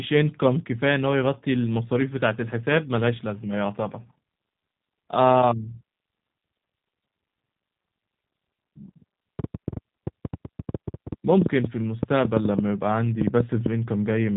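From the start the speech carries the G.729 codec's signature. The sound is rebuilt from a vocal tract filter, a pitch predictor and a handful of pulses per frame rather than sent as a waveform, so it comes through rough and faintly synthetic. Nothing reaches above 3.8 kHz. Unlike a plain low-pass or a wideband codec, the damage is plainly audible as a buzzy, model-made texture, which fits an 8 kbit/s VoIP link.

From 9.39 s to 13.67 s a train of clicks rides over the audio: around thirty sharp ticks of much the same shape, at about 6.6 per second, peaking at about 15 dB above the speech. They keep going through the pauses, which sets them apart from codec glitches or dropouts tied to the signal. The spacing is irregular rather than metronomic, so the likely cause is interference from nearby equipment or a faulty connection or power supply.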